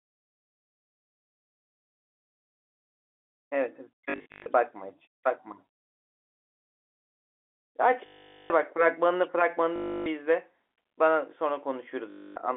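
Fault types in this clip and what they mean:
Packet loss with last packet repeated: when packets fail to arrive, the receiver keeps replaying the last good one, so the sound freezes into a robotic buzz instead of dropping to silence or fading out. Here it happens at 4.1 to 4.46 s, where the losses are scattered, then at 8.06 to 8.5 s (the longest, about 440 ms), 9.76 to 10.06 s, and 12.1 to 12.36 s. The buzz sits near 50 Hz, which fits 20 ms packets.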